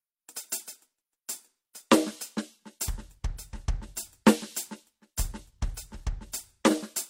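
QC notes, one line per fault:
Nothing to flag here; the music runs along with no faults to note.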